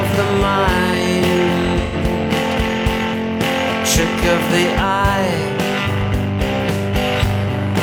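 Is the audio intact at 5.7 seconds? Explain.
Yes, the audio is intact at 5.7 seconds, with no dropout, click, distortion or other fault audible there.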